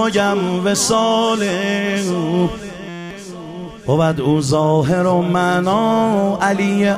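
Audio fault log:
2.89–3.11 s, system hang loop: for about 0.22 s the same 5.8 ms fragment repeats exactly, dozens of times, fusing into a steady 172 Hz buzz. This fits the playback hardware cycling a 256-sample ring buffer while the system stalled, and about a fifth of a second of real audio never plays. Unlike a dropout there is no silence, and unlike mains hum the tone starts and stops abruptly with the stall.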